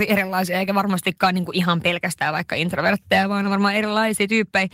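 No technical faults are audible in the speech.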